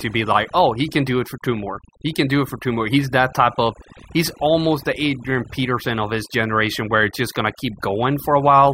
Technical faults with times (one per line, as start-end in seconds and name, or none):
0.00-8.73 overdone noise removal